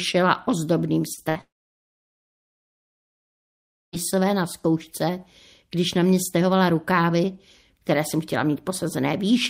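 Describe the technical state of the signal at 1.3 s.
A burst of packet loss from 1.29 to 1.37 s left about 60 ms of speech missing; concealment stretched and faded the last sound into a brief buzz or hiss.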